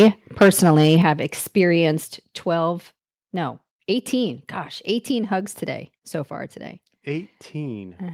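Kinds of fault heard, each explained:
Microphone overload: crackle only on the loudest peaks at 0–0.08 s and 0.41–0.97 s, unlike steady distortion. Likely gain about 6–9 dB over the converter's limit.
Microphone volume stepped down: voice and background drop together in single steps, about 7 dB at 1.02 s and 5 dB at 2.04 s, not gradual fades. Likely gain correction after overload.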